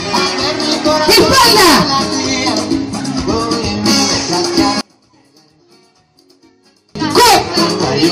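Between 4.81 and 6.95 s, one stereo channel has likely been flipped in polarity. This is one channel inverted. When the two channels are summed to mono, their shared content cancels, and the audio collapses by about 33 dB into a faint remnant before returning.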